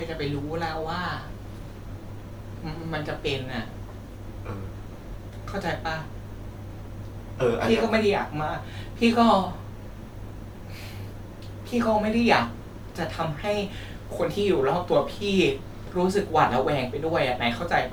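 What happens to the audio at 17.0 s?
At 17.0 s you're hearing generation loss, which runs through the whole clip. The speech sounds swirly, smeared and hollow, with blurred attacks. It's likely from around five rounds of MP3 encoding at about 128 kbit/s, each pass adding fresh quantisation noise and spectral holes.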